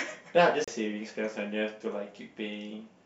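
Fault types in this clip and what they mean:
CD skip: the laser jumps tracks, so the speech mutes about 30 ms near 0.64 s and resumes from elsewhere, unlike a dropout, which resumes in place without a jump.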